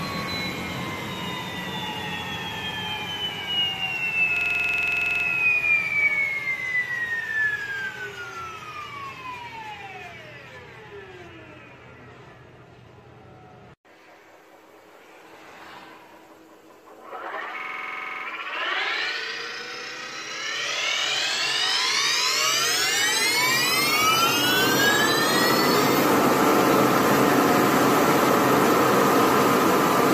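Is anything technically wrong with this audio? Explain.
Yes. A system hang loop occurs at 4.37–5.25 s and again at 17.60–18.25 s. The playback side stalled while the hardware kept replaying its ring buffer, so a 46 ms slice repeats at 21.5 Hz. This gives a rapid machine-gun stutter, consistent with a 2048-sample buffer.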